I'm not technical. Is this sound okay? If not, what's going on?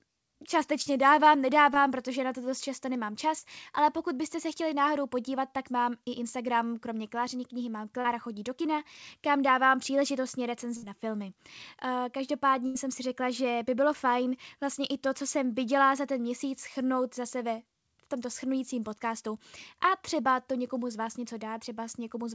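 No. This is a phone or internet call, and small pieces of the sound got lost on the way.

There are three moments of short concealed packet loss, at 0.82, 1.74 and 3.39 seconds. The second comes just before "protože na to dost". The third falls between "to dost často nemám" and "ale pokud byste se". In each, a few hundredths of a second never arrived. The receiving end filled the hole by stretching the last sound, so you hear a tiny smear or wobble.

Between 8.0 and 8.8 seconds there are scattered short gaps. This is after "knihy mám" and before "kam dávám příležitostně". About three separate tiny pieces went missing there. Each was patched the same way, so the sound has small hiccups rather than one clear break.

There are also two bursts of packet loss, at 10.77 and 12.66 seconds. Here a longer chunk went missing, about 60 and 80 thousandths of a second. The receiver held the last sound and let it fade, giving a brief buzz or hiss. 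Then the sound jumps ahead.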